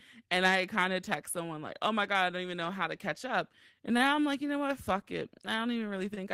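Twice in this speech recording a packet arrived late, the jitter buffer ran dry, and the receiver covered the gap by stretching the last sound: a short stall from a late packet. It happens at 3.97–4.01 s, just before "I'm like", and again at 6.14–6.19 s, filling about 21 ms and 24 ms. Nothing is lost, but each spot holds a sound slightly too long with a faint buzz or dip, and playback then runs that much later.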